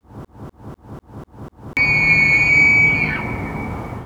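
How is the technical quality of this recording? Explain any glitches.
The recording has one clear glitch, a broken-record loop at the very start. From 0 to 1.77 s, a fragment of about 0.25 s repeats identically, already under way when the audio begins. It cycles six times before normal sound resumes, and whatever should have played there is lost. The likely cause is a player or stream stall that kept resending its last buffered piece. On a waveform or spectrogram it shows as identical blocks stamped side by side every 0.25 s.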